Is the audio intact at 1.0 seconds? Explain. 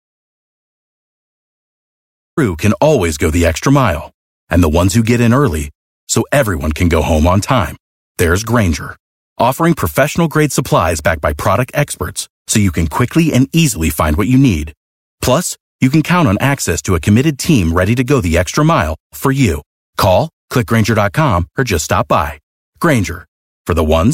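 No. An audio dropout to silence runs from the start to 2.37 s. The input was likely lost while zeros were written. It is dead silent, with no room tone.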